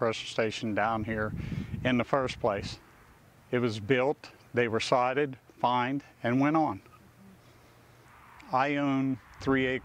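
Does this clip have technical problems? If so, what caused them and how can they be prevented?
No, the signal shows no technical faults, so there is nothing to trace back to a cause or guard against.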